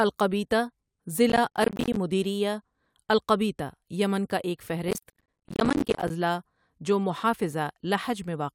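The processor fell behind and missed dozens of buffer deadlines again and again, each dropping a short slice of roughly 10 ms to silence. This processor overload crackle tears through the speech from 1.30 to 1.96 s, and more heavily from 4.88 to 6.10 s.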